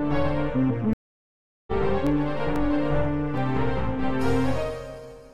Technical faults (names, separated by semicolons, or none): stream reconnect; CD scratch ticks